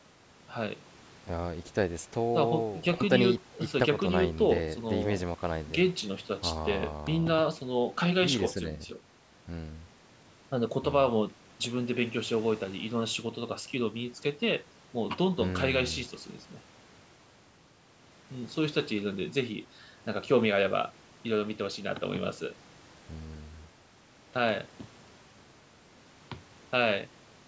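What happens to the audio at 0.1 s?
Nothing goes wrong at 0.1 s: the speech there is intact, and the only processing audible is the normal call microphone chain, with no content above 8 kHz.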